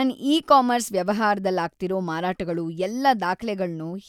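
No technical faults can be heard anywhere in this speech recording. There is no moment in it that calls for a time or an explanation.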